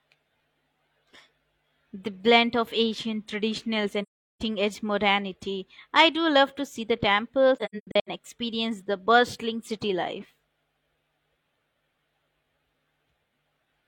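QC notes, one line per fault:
4.02–4.42 s, AAC frame loss with muting: after "blend of ancient traditionals" the speech fades to silence for about 384 ms and returns at "edge modernity I do". That fits a run of roughly nine consecutive frames zeroed by the decoder. The overlapping windows taper both edges. On a spectrogram this is a clean full-band blank gap, and the waveform shows a soft-edged flat hole.
7.56–8.09 s, AAC frame loss with muting: between "to see the temples" and "experience the bustling city" there are several short muted dropouts, about 341 ms in total, spread across 0.53 s. The longest gap is around a tenth of a second. Each zeroed frame fades out and back in over roughly one frame length. The spectrogram shows a comb of narrow vertical blank bands, and the waveform shows repeated tapered dips to silence.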